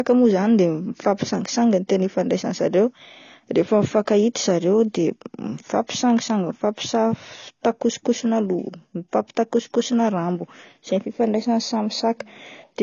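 AAC compression damage runs from start to finish of this speech clip. Nothing reaches above 7 kHz, so the top octave is gone and the sound is dull. The remaining spectrum is clearly smeared and warbly, with a fizzy edge on sibilants. The cause is likely low-rate AAC-LC coding, consistent with a bitrate around 24 kbps: too few bits to cover every band, so the encoder drops the highs and coarsely quantises what remains.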